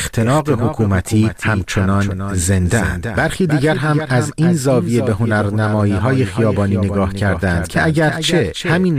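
A doubled audio track runs through the whole clip. A second copy of the speech sits about a third of a second behind the first. It is roughly 10 dB quieter, so it trails like a faint shadow. Each syllable returns intact and full-band, with no room tail or softening. The cause is likely a second capture through a slower path, or an edit that stacked two out-of-step copies.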